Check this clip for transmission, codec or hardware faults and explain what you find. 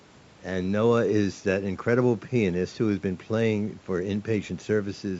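No transmission, codec or hardware faults are audible here.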